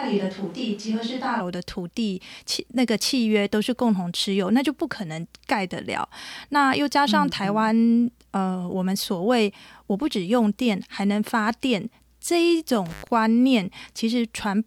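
A switch to a distant microphone is already under way when the clip opens and lasts until 1.39 s. The speech sounds roomy and hollow, thin in the bass, about 5 dB quieter, with room noise sitting roughly 30 dB below it, likely because a farther microphone stood in for the close one.

An intermittent contact strikes from 12.86 to 13.10 s. A loose cable or plug briefly breaks the connection: the sound drops out for about 0.10 s, with crackle at the break and the return, leaving faint hiss in the gap.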